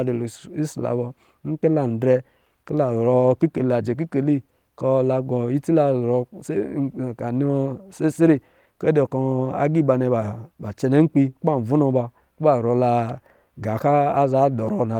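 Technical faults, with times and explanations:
No technical faults detected.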